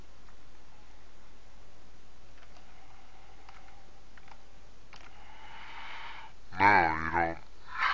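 Throughout, the sound drags at two-thirds speed and sits seven semitones low. This is a wrong sample rate, consistent with 24 kHz audio played at 16 kHz.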